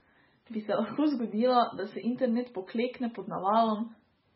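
Speech with heavy MP3 compression damage throughout. Nothing is left above 5.6 kHz, so the treble is cut off. Weak detail swirls and turns watery, and s sounds chirp metallically. The damage fits a very low bitrate, likely around 16 kbps.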